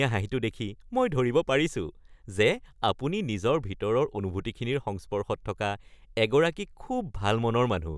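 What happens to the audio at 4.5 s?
Nothing goes wrong at 4.5 s: the speech continues cleanly through that moment, with no dropout, click, distortion or other fault to be heard.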